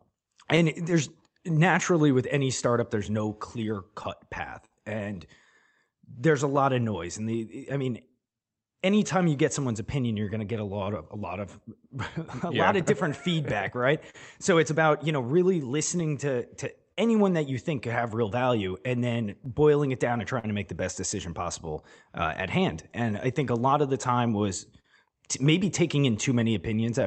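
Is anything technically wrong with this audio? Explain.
Yes. The speech has three related timing faults, heard through a call-codec path whose top end stops at about 8 kHz.

Clock drift between sender and receiver runs through the whole clip. The sender's clock is roughly 3% slower than the receiver's, so the receiver's jitter buffer keeps draining. It must keep stretching or patching the stream to avoid running dry, which gives the delivery a faintly uneven pace.

Repeated timing corrections cover 0.12 to 26.88 s. The receiver compensates by playing the speech at about 98% speed, adding roughly 400 ms overall. The inserted material comes in small, irregularly spaced pieces, so the result is a subtly dragging, slightly unsteady tempo rather than one clear slowdown.

Scattered short gaps appear from 0.56 to 27.04 s. There are around thirty of them, each where a packet arrived too late or not at all. 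The receiver filled each one by extending the preceding sound, the longest lasting about 50 ms. Together they total around 400 ms, about 2% of the span, and are heard as brief smears or hiccups.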